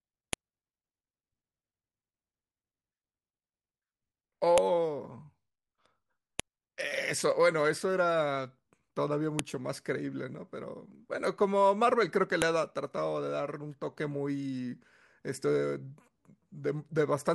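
Sharp, loud clicks land at 0.33, 4.58, 6.40, 9.39 and 12.42 s: a file header played as audio. Each marks a join where a WAV piece kept its header, so those bytes were reproduced as samples, producing a snap regardless of the speech underneath.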